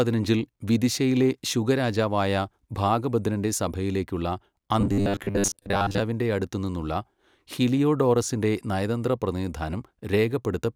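From 4.81 to 6.02 s speech becomes a metallic 100 Hz buzz, robotic sound from repeated short buffers, likely a 10 ms buffer replayed over lost audio.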